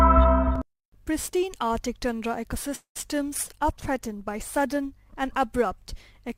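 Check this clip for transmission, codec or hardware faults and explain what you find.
Three transmission faults affect this clip, all between about 2.75 s and 4.90 s.

From 2.75 s to 2.97 s there is a call audio freeze. The last sound is stretched into a fading buzz or hiss, then about 110 ms of silence, most likely because packets stalled and the jitter buffer ran dry. Roughly 200 ms is inserted, so everything after arrives later. A spectrogram shows smeared, decaying bands followed by a blank column.

From 3.01 s to 3.04 s a short concealed packet loss follows: about 20 ms of audio never arrived and was patched from the preceding sound, then blended back. It is heard as a tiny smear or wobble. On the waveform it appears as a brief, slightly too-regular stretch.

From 3.43 s to 4.90 s there is a call bitrate drop. The sound turns rough, watery and muffled, which points to the encoder being pushed from around 96 kbps down to about 21 kbps, at the lowest for about 1.4 s. 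The spectrogram's upper band vanishes and detail coarsens until recovery.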